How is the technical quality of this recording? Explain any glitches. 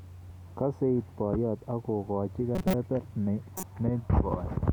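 Two glitches stand out, both corrupt frames decoded. From 2.55 to 2.74 s, and again from 3.57 to 3.64 s, damaged compressed frames were decoded anyway, pushing energy to the wrong frequencies. The first is a fairly loud glitch; the second is shorter and quieter.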